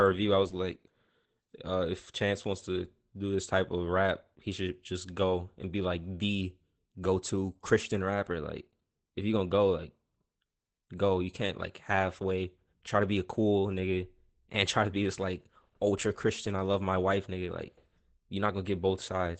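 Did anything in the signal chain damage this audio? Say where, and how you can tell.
Yes, at the codec: Opus voice compression throughout leaves a hard spectrogram ceiling near 8.6 kHz and hoarse, robotic speech from coarse SILK coding, consistent with about 12 kbps.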